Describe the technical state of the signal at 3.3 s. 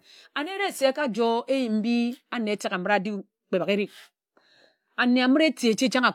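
At 3.3 s the speech signal is intact, with no dropout, click, distortion or other audible fault at that moment.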